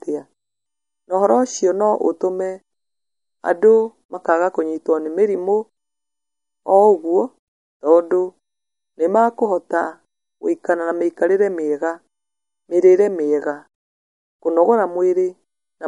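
Across the whole recording the speech carries plainly audible MP3 compression artefacts, most likely from a low-bitrate encode. Nothing remains above 11.1 kHz, so the encoder has cut the treble hard, and the damage level fits a bitrate around 48 kbps. With bits that scarce, weaker frequency lines drop in and out from frame to frame, giving a watery, swirling texture, metallic chirps on s sounds, and softened, smeared consonant attacks.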